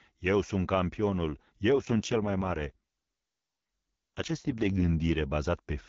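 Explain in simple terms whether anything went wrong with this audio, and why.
From 1.70 s to 5.24 s, an AMR rate drop makes the HD Voice speech rougher and more synthetic: the weak phone link forced fewer bits for the sound itself.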